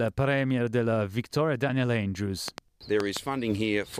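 From 2.48 s to 3.18 s a brief train of clicks cuts through the sound: roughly four sharp, similar-sounding ticks at an uneven pace of about 4.4 per second, each one jumping well clear of the material, by something like 15 dB. Because the clicks share one shape and arrive in a burst, the likely cause is an outside pulse source, such as interference from nearby equipment or a faulty connection or power supply.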